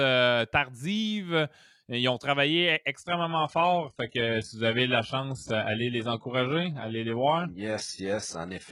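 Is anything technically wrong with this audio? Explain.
Yes. From 3.04 s to the end, the speech suddenly switches to an adaptive stream at a lower bitrate. Nothing sounds above 11.1 kHz, and codec artefacts rise, which fits a drop from 96 kbit/s AAC to 12 kbit/s HE-AAC. Unlike a dropout, the sound never breaks.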